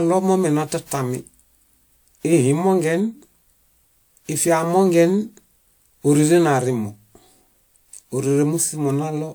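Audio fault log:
throughout generation loss: the speech sounds swirly, smeared and hollow, with blurred consonant attacks, likely from around five rounds of lossy re-encoding, fitting a 128 kbit/s WMA chain. A spectrogram shows smeared transients, with nothing above 20.1 kHz.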